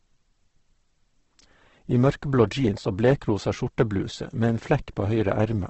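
The whole clip sounds grainy and rough with nothing above 8.2 kHz, likely heavy Opus compression near 12 kbps filling starved bands with noise.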